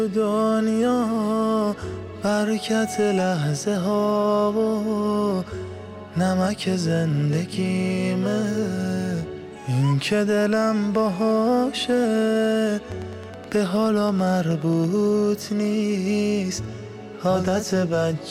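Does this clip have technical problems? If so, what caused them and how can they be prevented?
Yes. A train of clicks runs from 12.92 to 14.85 s: about twenty similar ticks, regularly spaced at 9.35 per second and roughly as loud as the sound. The steady pace sets it apart from random crackle. The likely cause is interference or a faulty connection or power supply. Prevent it by keeping other equipment away from cables and using a stable interface.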